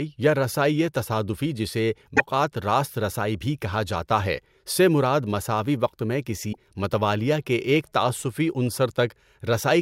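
At 2.15 to 2.20 s, right after "یا رسائئ تصادفی جسے", the speech skips ahead with a brief garbled blip, and the same happens at 6.52 to 6.57 s after "مساوی وقت میں". It's likely a broken MP3 bit reservoir: frames went missing, and the next ones borrowed bytes from the wrong place. Each glitch lasts about two 24 ms frames.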